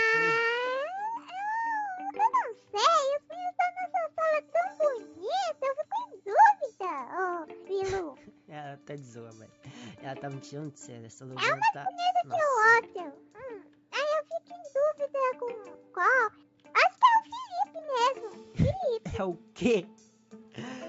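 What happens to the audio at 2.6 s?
Nothing goes wrong at 2.6 s: the audio carries on intact through that moment, with only the ordinary call microphone processing shaping it, which trims the deepest bass and leaves nothing above 8 kHz.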